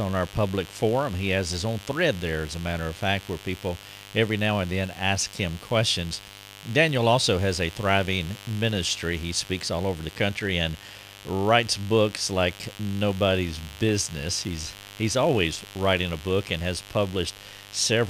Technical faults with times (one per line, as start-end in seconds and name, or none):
0.00-18.09 mains buzz